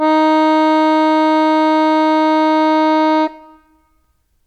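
No technical faults are audible.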